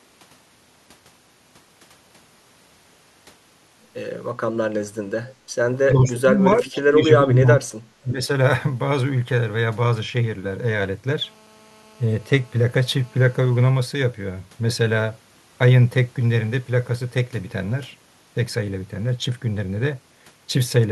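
Speech recording with three faults. Brief echo leak at 5.27–5.35 s and 6.66–6.80 s: a faint copy of the talker returns 354 ms late, about 20–25 dB down. It is a separate delayed repeat, not reverb, and is likely a far-end loudspeaker bleeding past an echo canceller. Speech suppressed in double talk at 5.93–6.38 s, 6.63–7.81 s and 8.02–8.20 s: the voice itself dips by roughly 15–25 dB in chopped pieces rather than gaining an extra copy, likely as the canceller ducks both sides at once. A GSM phone buzz runs from 11.23 to 13.70 s as a steady, raspy 217 Hz drone rich in harmonics, about 32 dB below the signal. Its fixed pitch, unrelated to the speech and unlike mains hum, points to a nearby 2G phone on a call.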